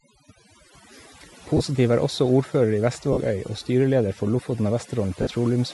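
From the start, the speech carries overdone noise removal. The suppressor is pulling individual frequency bands down hard wherever they sit close to its noise estimate, so the gaps between phrases collapse to near silence dotted with twinkling specks. Softer parts of the voice are caught by the same gating and are lost along with the background.

Over the whole clip there is also a breathy, grainy edge on the voice. The upper spectrum sounds sparse and partly replaced by noise rather than true harmonic detail. This is likely Bluetooth LC3 compression. The transform codec zeroes much of the high band and noise-fills it. The degree of damage, plainly audible, fits a rate around 48 kbps with 10 ms frames.

Three short dropouts follow, each a lost LE Audio frames event. At 1.57 s, just before "er også ordfører i", about 30 ms is replaced. At 3.13 s, right after "er også ordfører i", about 40 ms goes. 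At 5.22 s, about 50 ms is lost. In each case the decoder repeats the last spectrum with randomised signs and fades it, so the voiced sound turns into a brief noisy smear that sags in level. The lengths point to three, four and five consecutive frames.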